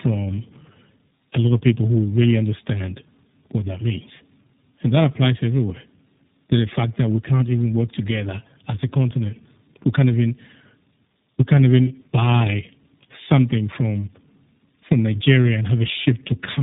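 Tandem speech coding runs through the whole clip: the call appears to have passed through two low-rate speech codecs in a row, with a plain G.711-style link between them, so it was decoded and re-encoded at each border. The second coder, which sounds like iLBC, had to model audio already smeared by the first. The result is rough, muffled and warbly speech, with nothing above 3.8 kHz.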